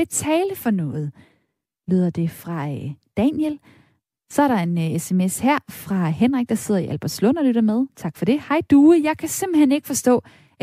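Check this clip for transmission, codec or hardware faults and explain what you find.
No faults found; the speech shows nothing that needs flagging.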